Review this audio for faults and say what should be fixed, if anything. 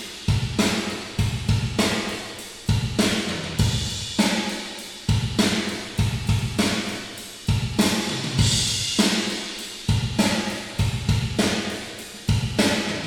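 Nothing here needs fixing; no faults found on review.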